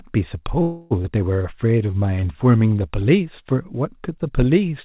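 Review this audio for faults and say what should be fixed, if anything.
From 0.62 to 0.93 s there's a call audio freeze: the sound hangs as a fading buzz for about 285 ms, likely packets stalling until the jitter buffer ran dry, and then it picks up without losing anything. A steadier network path, or a jitter buffer with a bit more headroom, would keep this from happening.

Right after, at about 1.03 s, there's a skip ahead: roughly a fifth of a second of speech just vanishes, and the two sides are butted together almost seamlessly. Letting the buffer shed delay gradually instead of dropping a chunk in one go would prevent it.

Between 1.42 and 2.75 s you get a jitter buffer slow-down: the buffer repeats pitch periods to rebuild its reserve, so the speech runs at about 85% speed and stretches by roughly 210 ms at the same pitch. Smoother delay adaptation, spread thinly across pauses, would make this much less audible.

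All of this rides on a G.711 mu-law call path, which accounts for nothing coming through above 4 kHz and fits a 64 kbps stream.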